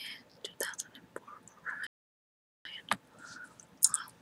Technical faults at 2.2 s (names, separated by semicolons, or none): playback stall